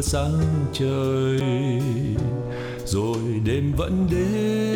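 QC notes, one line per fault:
1.40 s, CD skip: you get a tick and a very short dropout, just a few milliseconds of silence, and then the sound picks up from a different point rather than carrying on where it was. That's the laser getting knocked or tripped up by a flaw and landing on another turn of the disc's spiral. The player mutes briefly while it re-locks, so the audio jumps instead of flowing on.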